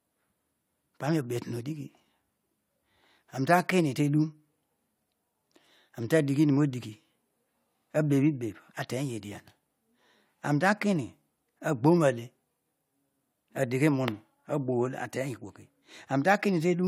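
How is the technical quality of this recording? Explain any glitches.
Nothing in this speech recording stands out as a technical glitch, so there's nothing here that needs explaining.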